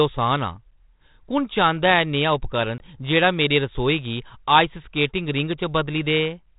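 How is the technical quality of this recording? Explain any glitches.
There's one real glitch, at 2.78 s, from packet loss on an ADPCM call. Roughly one packet's worth of audio, 20 ms, drops out and is filled with silence, so you get a hard-edged hole. The trouble is that the decoder's adaptive predictor and step size lose sync with the sender's during that gap, so the speech comes back with a bit of distortion. It settles by about 2.99 s. Underneath it all is G.726 ADPCM at 32 kbit/s, and you can hear its light, narrowband telephone character.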